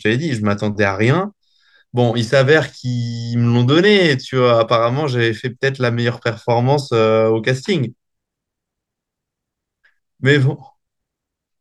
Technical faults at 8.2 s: none

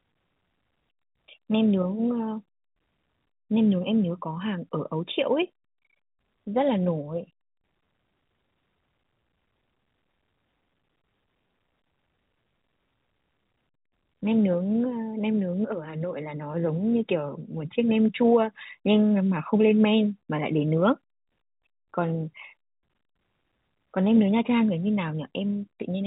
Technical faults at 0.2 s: none

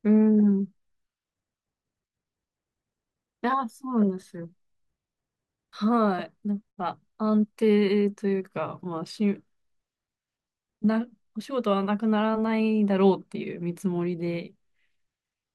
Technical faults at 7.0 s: none

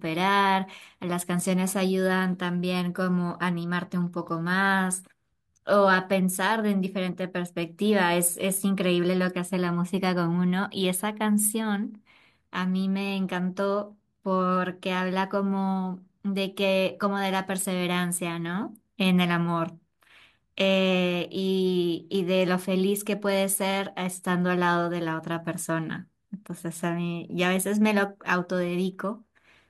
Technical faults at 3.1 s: none

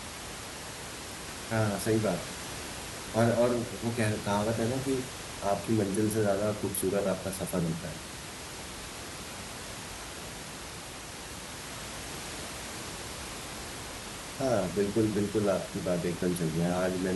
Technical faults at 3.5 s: none

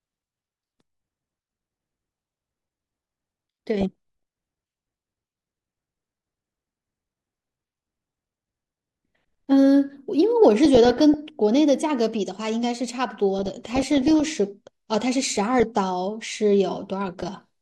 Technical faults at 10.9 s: DAB burbling

